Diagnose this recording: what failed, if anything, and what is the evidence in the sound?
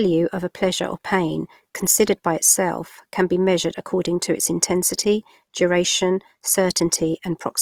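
The codec stage is at fault: Opus compression, likely in its music (CELT) mode at around 24 kbps, runs short of bits throughout and fills bands with folded or noise content. The speech sounds plainly grainy and rough, though bandwidth stays full, reaching about 20.4 kHz.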